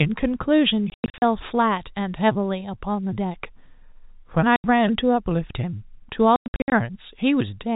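Packet loss filled with silence cuts the speech at 0.9–1.22 s, 4.56–4.64 s and 6.36–6.72 s. Holes fit 20 ms packets and have hard edges.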